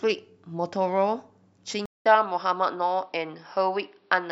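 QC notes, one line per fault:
1.86–4.32 s: input switched to a poorer device, likely. A 200 ms gap, then nothing above 5.6 kHz. The level shifts about 5 dB, with fresh background noise.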